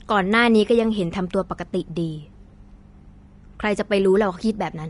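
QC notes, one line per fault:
Throughout: Vorbis compression artefacts. The treble is hissy and grainy. Sibilants and consonant edges lose definition, and attacks sound blurred. The upper band seems cut off early, and tones carry a rough, gritty texture. The damage is plainly audible. This is likely low-bitrate Vorbis coding, which fits a rate of around 33 kbps. The encoder keeps a smooth spectral outline but quantises fine high-frequency detail so coarsely that it turns into noise of similar energy.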